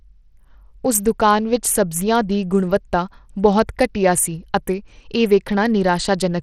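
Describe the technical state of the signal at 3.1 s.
At 3.1 s the speech is dull and gritty, and this holds for the whole clip, not just that moment. The treble is thin and flickers in and out, with a rough, grainy noise riding on the sound. This is likely Bluetooth SBC compression. That codec splits the signal into a few wide sub-bands and spends its scarce bits crudely. The weak top bands starve first. The damage is plainly audible and fits a low rate, around 80 kbps.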